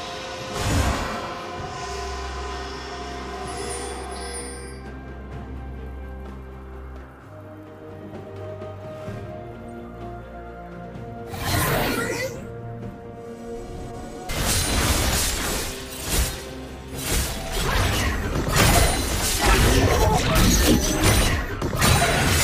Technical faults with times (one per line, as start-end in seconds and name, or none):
14.28 stream segment skipped